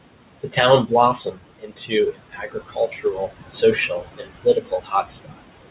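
Throughout the recording, noise suppressor artifacts shape the background. The room noise sits about 11 dB below the speech and is pulled down by about 21 dB in the gaps, then rises again under each phrase. This differs from a plain gate, which would switch the noise cleanly on and off. The band-limited sound, with nothing above 4 kHz, fits the G.711 mu-law path at 64 kbps and is not caused by the suppressor.

Speech cut by the noise suppressor occurs at 0.43–0.58 s (about 13 dB deep, roughly a tenth of a second affected), 1.25–1.93 s (about 21 dB), 2.12–3.32 s (about 20 dB), and 3.89–5.41 s (about 19 dB). In the later three stretches, roughly half a second or more of quiet speech sinks with the noise. Soft consonants and endings sound swallowed. Unlike packet loss, there are no clicks or repeated fragments, only fading.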